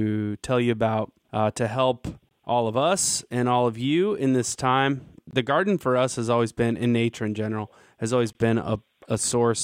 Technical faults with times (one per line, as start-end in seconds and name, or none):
2.29-2.31 gap between chunks
5.31-5.33 gap between chunks
8.33 gap between chunks